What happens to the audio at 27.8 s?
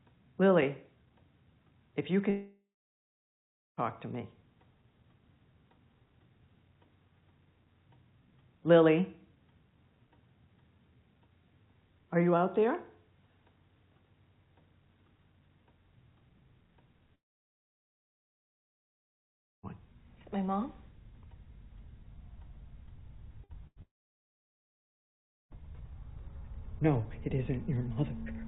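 Nothing goes wrong at 27.8 s: the audio plays through intact, with only the narrowband sound of the call path, which carries nothing above 4 kHz.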